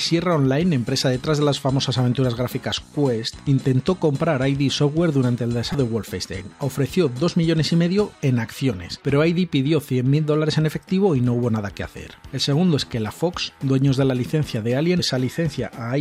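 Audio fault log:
5.71–5.75 s and 14.99 s: damaged data in a compressed stream. Two brief glitches, the first about 36 ms long and the second near-instant, where corrupted bytes left the decoder unable to read those frames until it found the next valid frame header.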